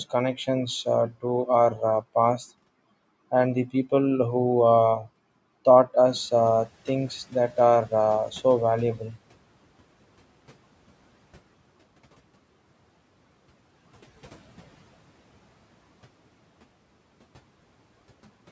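From about 6 s the background noise jumps by about 17 dB and comes through the speech with less reduction at first, then fades gradually until 9.17 s. This is the noise suppressor catching up: its noise estimate trailed the sudden rise, taking 3.1 s to adapt and cut about 12 dB.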